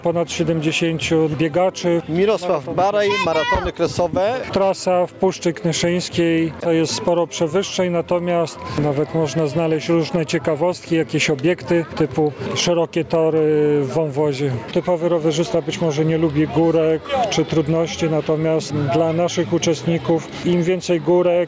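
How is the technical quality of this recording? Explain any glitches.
The recording suffers from gain pumping from start to finish. The input gain was likely set far too high, so a fast limiter clamps down on every loud sound. The gain swings by around 15 dB, leaving the dynamics squashed. The audio has also passed through a call's microphone processing, which removes the lowest bass and leaves nothing above 8 kHz.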